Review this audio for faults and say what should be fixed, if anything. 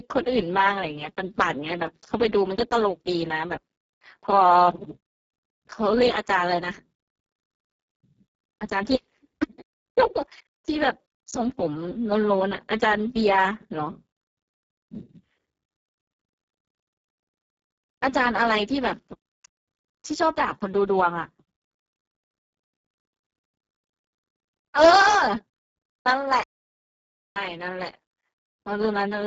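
Speex codec damage is heavy throughout. The speech sounds hoarse, noisy and near-robotic because few bits are left for the excitation, which points to a very low setting of about 6 kbps. Its buzzy roughness differs from the swirly, watery smearing of MP3-style artefacts, and nothing is heard above 7.7 kHz. To prevent it, record or transmit with a higher Speex quality setting or a modern codec such as Opus.

An audio dropout to silence runs from 26.43 to 27.36 s, a gap of about 0.93 s. The signal goes silent with no room tone, unlike a natural pause or a noise gate, which leaves a residual floor. The likely cause is a lost input link. To prevent it, secure the connections and monitor the input so that mutes or disconnections are caught during recording.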